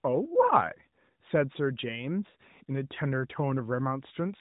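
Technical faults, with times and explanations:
No faults found; the speech runs over an AMR narrowband mobile codec path, with nothing above about 3.8 kHz and only light coding damage, which fits the 12.2 kbps mode, as expected for that link.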